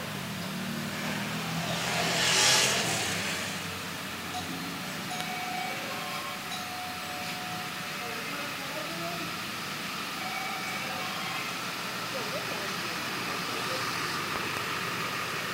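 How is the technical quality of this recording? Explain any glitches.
The recording has poor technical quality: a coarse grain runs through all of it, and sharp pops break in three times.

Low bit depth without dither is present throughout. The error sits only about 15 dB below the sound and tracks it, so quiet passages turn gritty and sputtery. This fits roughly 6-bit rounding, likely with no dither applied. On a waveform, the trace shows visible stair-steps; a spectrogram shows a grainy haze that follows the signal.

Loud pops occur at 1.88 to 1.90 s and at 5.21 to 5.23 s, with a double pop between 14.36 and 14.59 s. Each sits about 20 dB above the sound, which continues underneath. The likely cause is a voltage pulse from a switch, plug or driver glitch. On a waveform they appear as tall isolated spikes; on a spectrogram, as thin full-height vertical lines.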